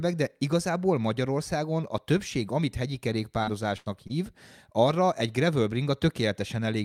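Right after "a többség amit hegyi", from about 3.43 to 4.28 s, the speech runs into repeated packet loss with a robotic sound. It sounds like four separate dropouts bunched together, the longest about 80 ms, with roughly 140 ms of audio gone in all. Each hole gets papered over by stretching the last bit of sound, which covers about 17% of that stretch and gives it a choppy, robotic edge until "arra egy gravel".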